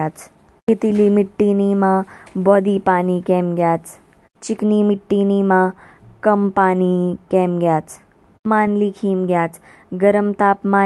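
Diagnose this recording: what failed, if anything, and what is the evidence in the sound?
Nothing stood out on listening to this speech recording that would point to a failure at any stage.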